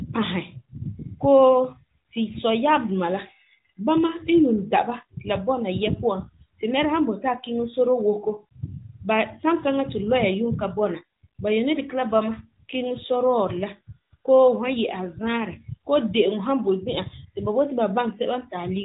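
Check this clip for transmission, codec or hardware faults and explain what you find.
No transmission, codec or hardware faults found; the speech comes through a narrowband mobile codec path with nothing above 4 kHz and only light coding texture, consistent with AMR-NB at its top 12.2 kbps mode.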